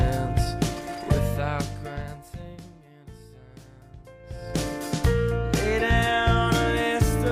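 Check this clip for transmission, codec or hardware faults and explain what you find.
One fault is present: zipper noise from 4.18 to 4.61 s. A level change of roughly 25 dB is applied in unsmoothed 2 dB steps, about 30 per second. Each jump produces a small click, so a rapid ticking rides on the sound while the level moves.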